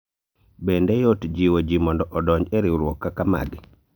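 Nothing in this short speech recording points to a technical problem in the signal path.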